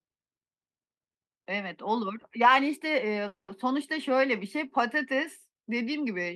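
A call audio freeze runs from 3.27 to 3.50 s. The speech halts and the last sound lingers as a brief fading buzz before dropping into about 140 ms of silence. The speech then resumes exactly where it stopped, with nothing skipped, but everything after it now arrives about 210 ms late. Packets were likely delayed in transit, draining the jitter buffer, so the receiver filled the wait instead of discarding audio.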